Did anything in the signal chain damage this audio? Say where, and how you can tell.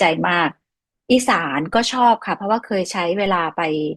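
Yes. A DC step at the converter or analogue input shifted the waveform's zero line by about -28 dBFS at 1.74 s and held it until 3.26 s, when it stepped back. Each jump is heard as a low thump or click while the speech continues unchanged.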